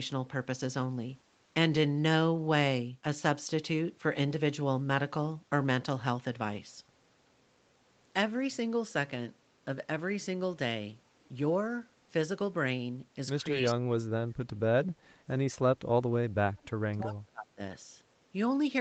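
Speech, carried over an Opus call path whose band stops near 8 kHz, shows speech suppressed in double talk three times: 13.6–14.02 s, 14.19–15.4 s and 16.35–17.61 s. The voice sinks by about 30 to 35 dB and breaks up. The likely cause is an echo canceller clamping down while both sides spoke. On a waveform these spans show as sudden envelope collapses, and a spectrogram shows the harmonics fading out in patches. An echo leak appears at 13.66–13.74 s as a short delayed copy of the voice, arriving about 283 ms behind it and roughly 10 dB quieter. This is likely residual loudspeaker pickup that the canceller failed to remove. A spectrogram would show it as a brief ghost of the earlier harmonic pattern overlapping the suppressed region.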